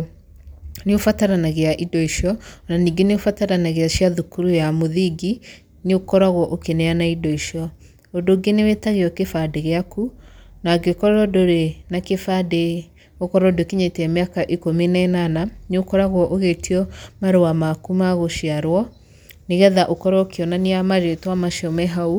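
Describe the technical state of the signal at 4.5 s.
At 4.5 s the speech signal is intact, with no audible dropout, distortion or other technical fault at that moment.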